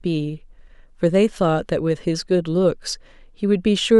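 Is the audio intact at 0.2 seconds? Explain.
Yes, at 0.2 s the speech runs intact, with no dropout, click, distortion or other fault audible at that moment.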